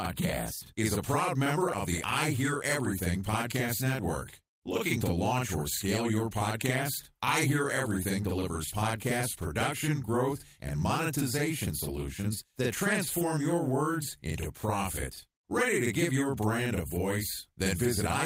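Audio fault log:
Throughout, channel delay (doubling): the speech sounds doubled, with a slap echo at equal level trailing every syllable by about 46.4 ms. One channel runs late, which fits a 2048-sample buffer at 44.1 kHz, and summing to mono exposes the copy.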